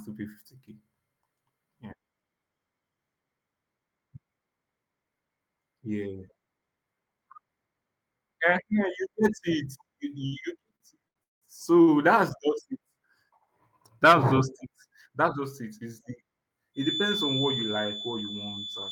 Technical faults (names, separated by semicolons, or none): repeated stalls (stutter); feedback whistle